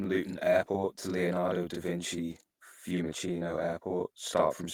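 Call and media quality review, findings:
Channel delay (doubling): speech doubled with a short slap throughout, one channel about 40 ms late and summed to mono at equal level.

Clock drift between sender and receiver: small uneven hiccups through the clip. Sender clock runs roughly 2% slow, so the jitter buffer keeps draining.

Repeated timing corrections: 0.52 to 4.13 s, tempo sags to about 98% as the receiver repeats short slices, adding around a tenth of a second in total.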